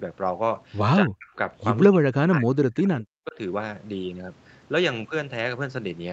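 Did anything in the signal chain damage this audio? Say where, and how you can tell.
Yes, in call processing. The speech is suppressed in double talk at 1.0–1.37, 1.88–2.91 and 3.25–3.38 s. The echo canceller likely ducked the near talker.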